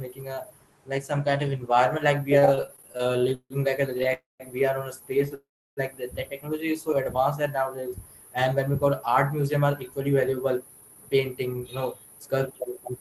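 A switching power supply whistles throughout. Its high tone wanders between 10.9 and 12.6 kHz, close to the top of the call's band. It sits roughly 25 dB below the speech and stays audible under it.

From 2.39 to 4.12 s, packets kept arriving late, so the jitter buffer ran dry 20 times. Each time the receiver stretched the last sound to cover the wait, 417 ms in all, with the longest wait 157 ms. This is repeated stalls (stutter): the speech drags and judders, and about a quarter of that stretch is filled-in sound rather than real audio.

Two call audio freezes follow, likely from packets held up on the network. From 4.13 to 4.43 s the last sound is held and fades, and then about 180 ms of silence before the speech resumes where it stopped. From 5.34 to 5.80 s the same happens for 425 ms, with about 330 ms of silence. Each freeze inserts a gap, and nothing is lost.

From 6.94 to 7.96 s the jitter buffer, building up a reserve, repeated pitch periods and adds 85 ms. 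This jitter buffer slow-down plays the speech at 92% speed without changing its pitch, so sounds come out drawn out.

From 9.54 s to 12.98 s the buffer held too much, so the receiver cut short pitch-period pieces, removing around 0.3 s. This jitter buffer speed-up runs the speech at 109% speed at unchanged pitch, which makes it sound hurried.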